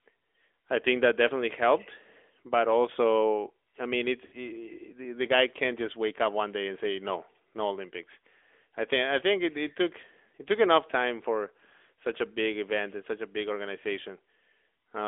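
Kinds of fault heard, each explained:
AMR narrowband mobile codec: speech confined to about 300 Hz to 3.5 kHz and rebuilt from a vocal-tract model, sounding plainly buzzy and synthetic, which fits a 10.2 kbps mode.
Lost AMR speech frames: at 4.26 s, after "also I mean it's", the decoder repeats the previous sound with fading gain for 60 ms before "the the guy can't".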